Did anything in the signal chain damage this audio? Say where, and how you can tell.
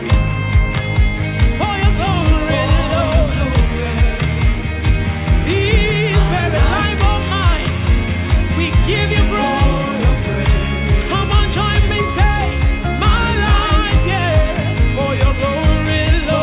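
No; the call codec's 4 kHz ceiling is expected.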